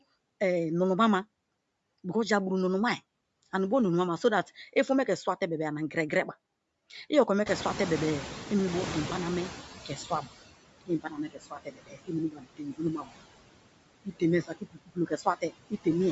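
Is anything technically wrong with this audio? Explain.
Yes. This speech clip has several technical faults.

Noise suppressor artifacts run throughout. The background is cut by about 21 dB frame by frame, so the residue sinks between words and rises under them. It stays present throughout, unlike the brief cuts below.

Bluetooth LC3 compression is the likely cause of a plainly audible breathy, grainy edge on the speech throughout. It fits a 48 kbps stream in 10 ms frames with the upper band noise-filled. Nothing is heard above 8 kHz, which fits the call microphone's band limit.

The noise suppressor is catching up from 7.46 to 10.33 s. The room noise jumps by about 20 dB near 7.5 s and comes through with less reduction before the suppressor's estimate adapts over 2.87 s, reaching about 17 dB of cut. It is a slow fade of the background, not a drop in the speech.

Speech is cut by the noise suppressor at 9.88–10.28 s (about 10 dB), 10.81–12.13 s (about 20 dB), 12.30–13.11 s (about 21 dB) and 14.43–15.53 s (about 22 dB). 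Within each span, parts of the speech totalling roughly 0.15 to 0.7 s are mistaken for noise and sound swallowed and faint. Here the speech itself dips, not the background.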